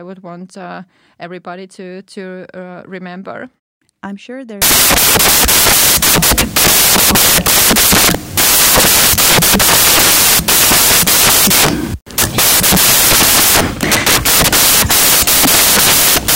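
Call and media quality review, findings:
Samples built from the wrong bytes, 4.62 s to end of clip, right after "I'm sure". Speech replaced by loud, harsh broadband noise. Probable component: decoder or sample reader. Byte offset, swapped byte order or wrong alignment makes the fast-changing low bits the large part of each sample.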